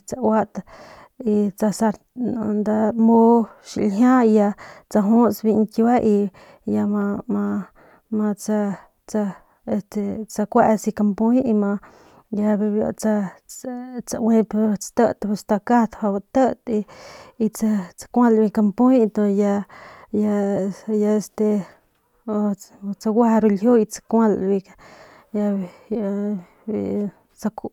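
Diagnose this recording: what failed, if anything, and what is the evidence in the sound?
Nothing failed here: the speech comes through with no audible problems anywhere along the chain, so there's nothing to diagnose.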